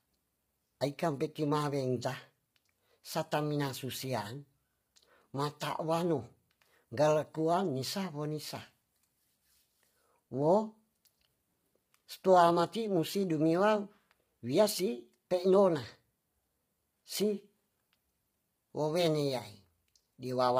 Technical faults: low-delay AAC compression

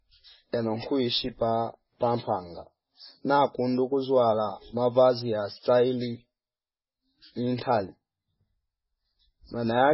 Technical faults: MP3 compression

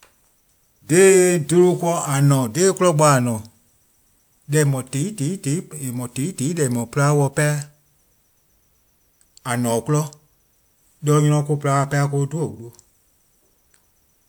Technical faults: none

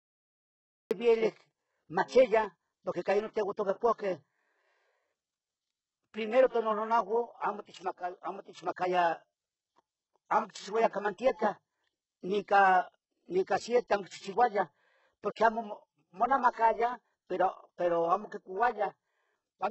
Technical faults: HE-AAC compression; cut-off start; pre-echo

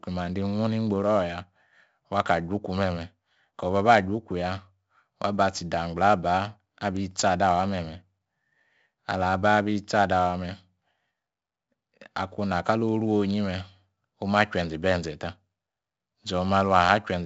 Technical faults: 4-bit ADPCM compression

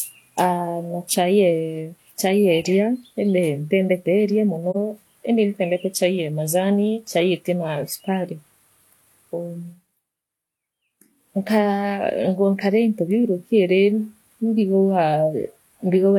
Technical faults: AAC frame loss with muting

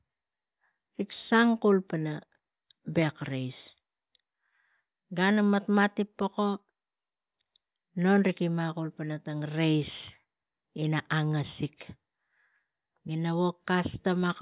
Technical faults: none

